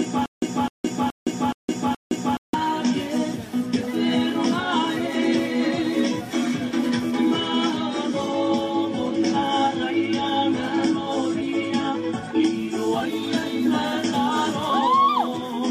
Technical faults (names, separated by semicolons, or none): stutter with silent gaps